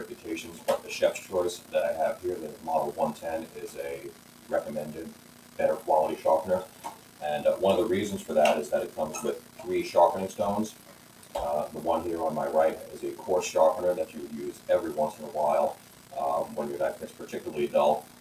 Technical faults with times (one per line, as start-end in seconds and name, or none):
0.00-18.20 noise suppressor applied to music or sounds
0.07-4.51 sound cut by the noise suppressor
5.07-5.59 sound cut by the noise suppressor
6.66-7.22 sound cut by the noise suppressor
8.90-9.64 sound cut by the noise suppressor
10.71-11.35 sound cut by the noise suppressor
14.06-15.22 sound cut by the noise suppressor
15.75-16.13 sound cut by the noise suppressor
17.01-18.20 sound cut by the noise suppressor